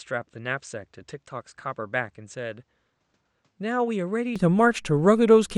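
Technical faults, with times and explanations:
0.0–4.36 s, input switched to a poorer device: The speech is dull and roughly 10 dB quieter. Nothing above 8.6 kHz comes through, and a faint background noise sits under it. At 4.36 s it clears up with no gap. This is likely a switch to a narrower-band microphone.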